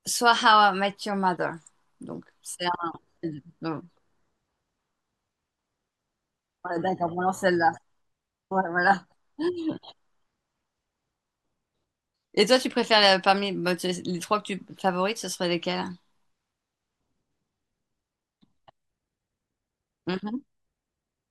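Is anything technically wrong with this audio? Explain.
Yes. Between 6.64 and 6.76 s there is a sudden gain jump: speech and background noise drop together by about 6 dB, likely from a digital gain change applied without a ramp.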